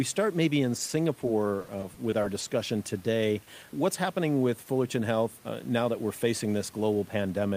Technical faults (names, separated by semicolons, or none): repeated packet loss (robotic sound); short stall from a late packet